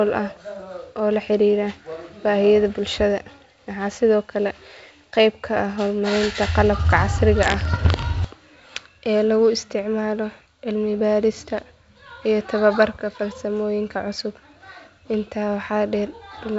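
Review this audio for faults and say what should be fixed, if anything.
A short stretch of crackle from 7.73 to 7.99 s: pops and rough, gritty bursts with brief jumps in level, audible as a quarter-second disturbance in the speech. These are bit errors on an ADPCM link, here the G.722 path running at 64 kbit/s, with a rate of about a third of a percent. Each flipped bit corrupts the decoder's adaptive step size and predictor, so the damage keeps ringing for several milliseconds after every hit. To prevent it, protect the link with error detection and concealment or fix the transmission fault that is flipping bits.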